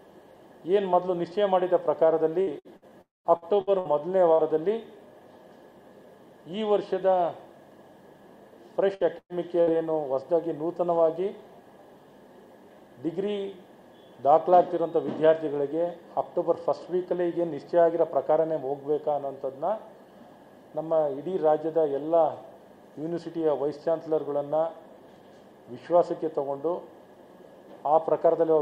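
From 2.41 to 4.42 s, repeated packet loss (robotic sound) chops the audio into a stutter. Seven gaps, the longest 60 ms, are patched by stretching the last sound. A spectrogram shows smeared, repeated frames between short breaks.

Inside that stretch, from 3.01 to 3.28 s, a brief buzz fades into about 180 ms of silence, and the sound returns with a piece missing. This is likely a long network dropout. The waveform shows a decaying tail, then a flat gap.

From 8.95 to 9.70 s, four more gaps recur, the longest 109 ms, with blurred, repeated spectral columns.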